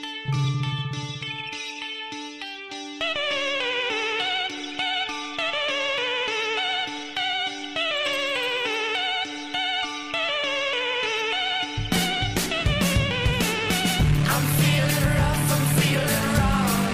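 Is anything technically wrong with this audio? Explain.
No, nothing technically wrong can be heard here.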